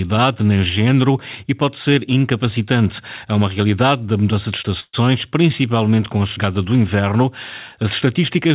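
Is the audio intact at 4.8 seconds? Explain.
No. From 4.8 to 4.95 s, after "realidade da mudança de", the speech stalls into a fading buzz that drops briefly to silence, then resumes at "principalmente com a chegada" with nothing lost, only 133 ms added. This call audio freeze likely came from delayed packets emptying the jitter buffer.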